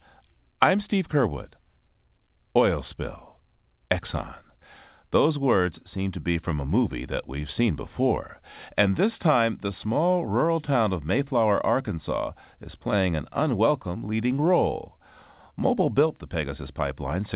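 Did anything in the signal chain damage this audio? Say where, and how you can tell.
No, nothing in the chain damaged this speech; it simply sounds like a phone call, with nothing above 4 kHz, which fits the G.711 A-law codec on a WebRTC call path doing its normal job.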